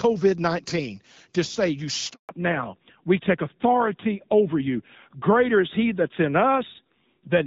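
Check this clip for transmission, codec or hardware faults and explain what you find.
Two faults show up, and they're linked: a brief dropout followed by a drop in audio bandwidth for the rest of the clip.

The handover gap runs from about 2.13 to 2.29 s, a 160 ms hole. The call is being passed from one network to another, and while the link switches over no speech frames get through. So the speech fades out within a few tens of milliseconds, sits in silence for that stretch, and picks back up once the new path is live. Whatever was said in that window is simply gone.

Right after the gap, from 2.29 s to the end, there's a fallback to narrowband. Before the handover the speech has that HD Voice openness, with the slight coding softness you'd expect from AMR-WB at around 12.65 kbit/s. Afterwards nothing above 4 kHz remains, so the sibilants and airy top end disappear and the speech sounds duller, boxier and a bit grainier. 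That roughness fits the call renegotiating down to an older narrowband codec at a lowish rate, something like AMR-NB at 7.4 kbit/s.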